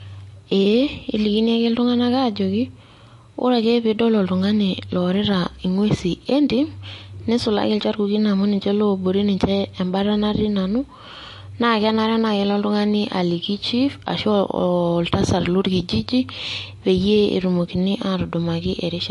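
The speech in this recording was most likely squeezed through MP3 compression at a low bitrate, with damage plainly audible across the whole clip, in a way that fits something near 48 kbps. Short of bits, the encoder chopped off the treble, leaving nothing above about 11.3 kHz, so the sound is dulled. It also dropped quieter frequency lines that flicker on and off between frames, giving a watery, swirling texture, with metallic chirps on s sounds and smeared consonant attacks.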